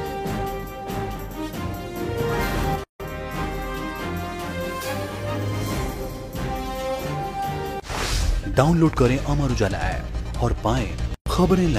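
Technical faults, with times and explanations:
2.84 s and 11.14 s, gap at a join of encoded pieces: the audio was encoded in separate segments and spliced back together without removing the encoder's leading delay or the padding on each segment's final frame, so that dead air stays in at each join. The sound breaks off in a gap of 160 ms at 2.84 s and about 120 ms at 11.14 s, with smeared edges, and then resumes exactly where it broke off.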